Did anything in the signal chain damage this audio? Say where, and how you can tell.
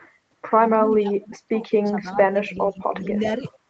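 Yes. Speech suppressed in double talk at 0.83–1.63, 1.79–2.07, 2.30–3.02 and 3.18–3.45 s: the speech dips by up to about 35 dB, likely because the call's echo canceller ducked both talkers.

Echo leak at 2.13–2.17, 3.03–3.07 and 3.49–3.59 s: faint copies, about 20–35 dB down and 415 ms late, are likely loudspeaker pickup that the canceller failed to remove.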